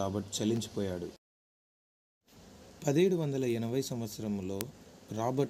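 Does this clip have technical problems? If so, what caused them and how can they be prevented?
Yes: word clock ticks, about 30 sharp ticks roughly every fifth of a second from 0.19 to 5.35 s. An unlocked receiving clock, off by roughly 150 ppm, drops or repeats a sample at each slip. Their steady spacing distinguishes them from random dropout clicks. Lock the receiver to the incoming clock or a shared word clock.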